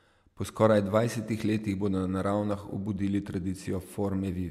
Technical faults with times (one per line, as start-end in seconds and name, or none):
none